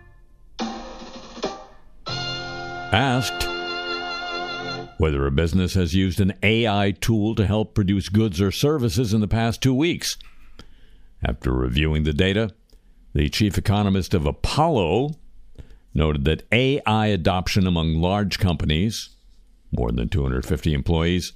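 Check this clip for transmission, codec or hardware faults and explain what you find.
No transmission, codec or hardware faults are audible anywhere in this clip.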